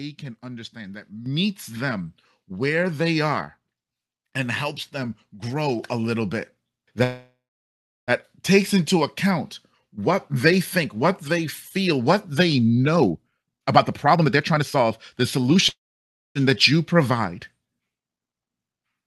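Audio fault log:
1.26 s, microphone volume stepped up: between "can understand that" and "them where they are", the input gain on the microphone was raised in a single step of about 9 dB, so the voice and the room noise behind it both jump louder at the same instant and stay there.
7.03 to 8.11 s, call audio freeze: the jitter buffer ran dry for about 1.04 s, likely because packets were held up in transit. The last sound is stretched into a fading buzz that drops to silence for roughly 0.71 s. The speech then resumes exactly where it left off, so nothing is lost and what follows runs about a second later.
12.97 to 14.91 s, jitter buffer speed-up: after "they feel what they", the receiver had built up too much delay and cut it back by removing many short pitch-period slices, around a second in total. The speech runs at 1.48 times normal speed with its pitch unchanged, so it sounds rushed.
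15.37 to 15.56 s, jitter buffer speed-up: a brief second catch-up trims a few tens of milliseconds, playing the speech at 1.16 times normal speed just before "that you". The squeeze is heard as a hurry at unchanged pitch.
15.69 to 16.38 s, call audio freeze: the buffer emptied again for about 0.67 s, likely from delayed packets. A short fading extension of the last sound gives way to roughly 0.59 s of silence, and the speech then carries on intact, pushed later by that gap.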